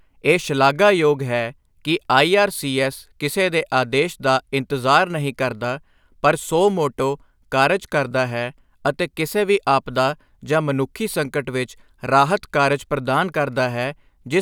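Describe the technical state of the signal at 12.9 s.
At 12.9 s the speech signal is intact, with no audible technical fault at that moment.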